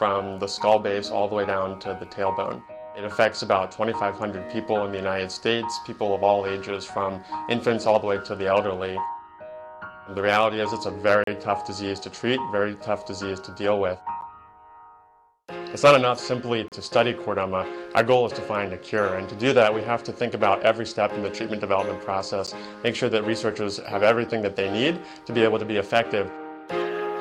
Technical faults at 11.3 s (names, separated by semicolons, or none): periodic clock jitter; block of digital silence